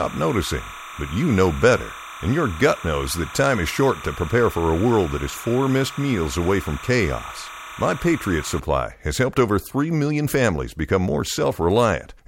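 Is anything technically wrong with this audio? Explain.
Yes. From 0.0 to about 8.6 s there is timecode bleed: linear timecode from an adjacent track or cable couples into the speech path. Its square wave flips between pitches near 1 and 2 kHz, repeating at 30 frames per second, producing a chirping warble roughly 15 dB below the speech. Unlike a steady whistle or hum, it alternates between two pitches in a rapid, regular pattern.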